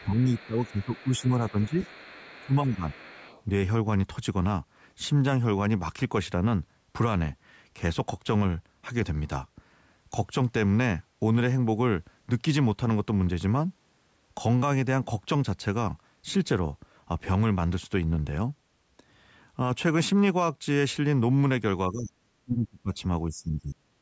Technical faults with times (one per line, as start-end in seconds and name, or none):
0.00-1.75 speech suppressed in double talk
0.37-3.43 other side's voice leaking through
2.40-2.96 speech suppressed in double talk
21.90-22.92 speech suppressed in double talk
23.28-23.79 speech suppressed in double talk